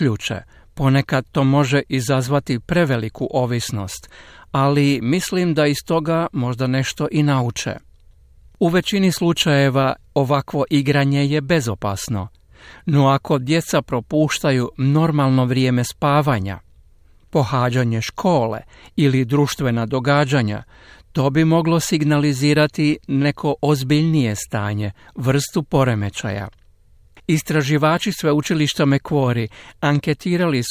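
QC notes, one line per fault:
No technical faults heard anywhere in this recording.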